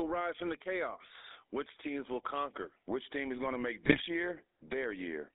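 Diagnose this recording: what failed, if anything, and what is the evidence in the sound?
The codec stage shows GSM full-rate codec damage throughout. The speech has a buzzy, gravelly roughness and sits in a band from about 250 Hz to 3.6 kHz, which fits the 13 kbps full-rate coder. A spectrogram shows an empty region above 3.6 kHz and grainy, smeared harmonics. The coder rebuilds the voice from a vocal-tract filter driven by a thinned pulse excitation.

The radio link shows GSM bit errors from 3.84 to 4.07 s, where the speech breaks into squawks, pops and gargling. Corrupted filter, pitch and gain values in the decoded frames warp the spectrum and throw the level around. On the waveform this shows as abrupt level jumps. On a spectrogram it shows as blocky, frame-length smears.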